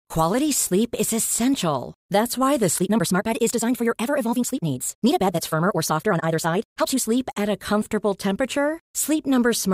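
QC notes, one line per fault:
2.72–7.06 s, time-stretched section: Right after "why the", the pace suddenly jumps to 1.89 times normal while the pitch stays put. The sound turns rushed. Software likely squeezed this passage to fit a length, dropping short slices to hold pitch.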